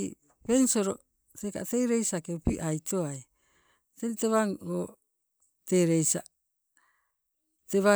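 Speech recording with no technical faults to be heard.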